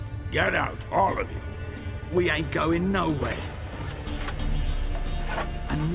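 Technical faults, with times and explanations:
No technical faults can be heard anywhere in the clip.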